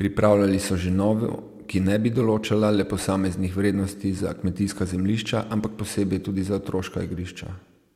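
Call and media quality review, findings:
Listening through the speech recording, nothing stood out that would warrant a finding.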